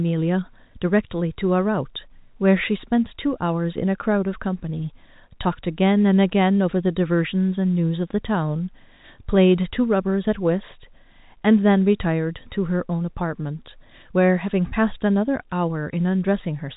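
No faults are audible in the speech, which carries the narrow bandwidth of G.711 telephone coding, with nothing above 3.8 kHz.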